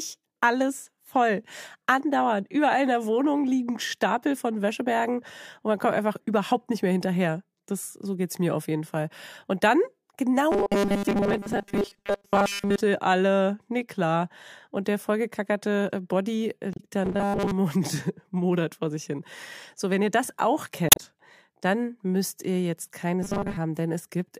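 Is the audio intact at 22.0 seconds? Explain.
Yes, at 22.0 seconds the speech plays through intact, with no audible fault at that moment.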